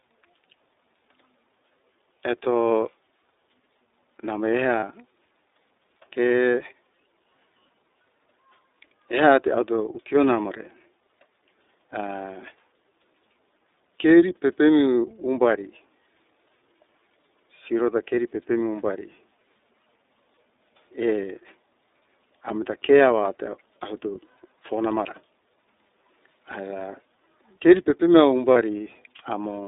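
The whole speech clip runs through the iLBC codec. Nothing passes outside roughly 300 Hz to 3.7 kHz, and the speech has a plainly audible rough, synthetic edge. That independent per-frame excitation coding sets it apart from smoother narrowband codecs, and the sound fits iLBC's 30 ms mode at about 13.3 kbps.

At 4.80 to 4.83 s, and again at 28.53 to 28.57 s, there are lost iLBC frames. Each gap is about one 30 ms frame, filled with a brief buzzy, breathy held pitch. Unlike concealment in predictive codecs, the voice recovers cleanly on the very next frame.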